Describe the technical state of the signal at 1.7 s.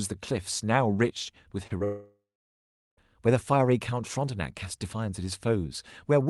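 At 1.67–1.72 s, and again at 1.78–1.82 s, there is short concealed packet loss. About 20 ms of audio, consistent with one lost packet, was bridged by extrapolating the preceding sound, leaving a brief smear rather than a silent gap or click.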